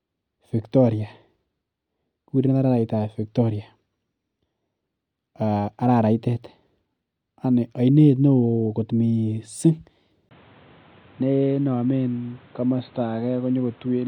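At 10.29 s the speech turns dull and boxy until the end, after a 20 ms gap, with nothing above 4.3 kHz, a level drop of roughly 5 dB and new background noise roughly 30 dB below the speech. This is likely an input switched to a poorer device; the gap and changed noise set it apart from a mere filter.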